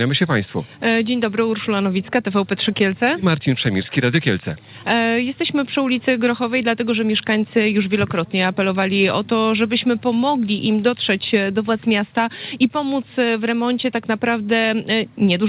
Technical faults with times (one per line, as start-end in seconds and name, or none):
none